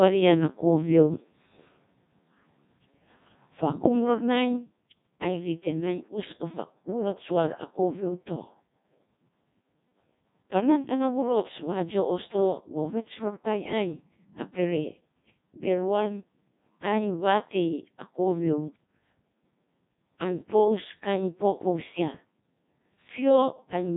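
The speech has passed through a Codec 2 vocoder for its whole length. The sound points to a rate near 1.2 kbit/s. Only pitch, voicing, energy and a spectral envelope survive, so the decoder rebuilds the voice from sine waves, leaving it heavily robotic and buzzy with nothing above 3.8 kHz.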